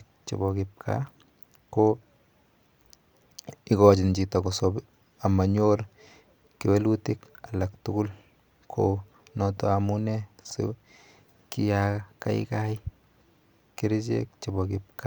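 No technical faults are audible anywhere in this speech recording.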